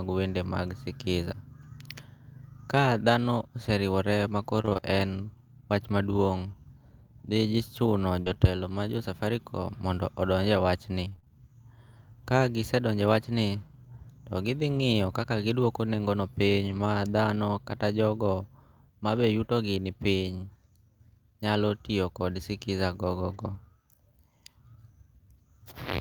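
A speech recording with three kinds of network damage. The first is repeated packet loss, which gives a robotic sound, from 4.61 to 4.84 s. Six short holes fall close together here, the longest 20 ms. Each one is patched by extending the sound just before it. About 105 ms of the 120 ms lost is filled this way, nearly half of that short stretch. The result is choppy, with small pieces missing.

Scattered short gaps follow between 8.22 and 11.3 s. There are roughly seven of them, spread out rather than bunched. The longest is around 40 ms. Each is covered by continuing the last sound, so only about 5% of the span is concealed. What you hear is brief ticks, smears and hiccups inside otherwise flowing speech. A little of the audio also seems stretched by about 15 ms.

The later faults are lost packets rebuilt from error correction. The next packet carried a low-bitrate copy of the missing audio, so no gap opens. 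The first is at 14.78 to 14.80 s, between "to gi thi" and "kaka gidwoko nengo'no". The second runs 16.66 to 16.80 s, after "kaka gidwoko nengo'no" and before "thano kata jogo mabe". About 80 ms of it is rebuilt, which points to several separate losses. Another short one sits at 20.28 to 20.30 s. The longest runs 23.30 to 23.56 s, with about 140 ms rebuilt. Each rebuilt patch sounds rougher and noisier than the speech around it.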